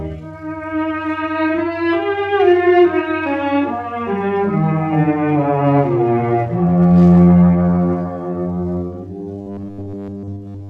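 The audio turns into robotic sound from repeated short buffers from 9.41 s to the end at 10.69 s. Over that stretch it takes on a rigid, metallic buzz at a fixed 100 Hz that only loosely tracks the underlying sound. The likely cause is audio arriving too late, so playback fills gaps by looping the most recent 10 ms fragment while fresh material is dropped. Most of the stretch, roughly 70 percent, is repeated rather than new audio.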